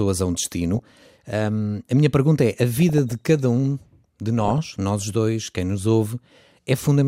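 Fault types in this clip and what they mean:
DAB burbling: weak reception lets residual bit errors slip past error correction into the MP2 stream, so corrupted samples add short noise blips in single sub-bands and corrupted scale factors make individual sub-bands leap in level for up to a frame. Here the speech picks up burbling in three bursts: 0.74 to 0.96 s after "a um", 2.75 to 3.29 s after "minha pergunta é a", and 4.40 to 4.72 s before "nós dois quem nos". This fits a bit error rate of a few tenths of a percent.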